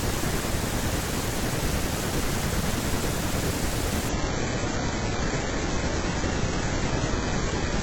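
A speech clip with an adaptive stream at a lower bitrate. At 4.09 s the quality drops suddenly and stays low to the end. There is no gap at the switch. The streaming player swapped to a cheaper version of the stream when the connection slowed. After the switch, nothing is left above 8 kHz. The treble sounds thin, and codec artefacts rise. The change fits a move from AAC-LC at around 96 kbit/s to HE-AAC at around 8 kbit/s.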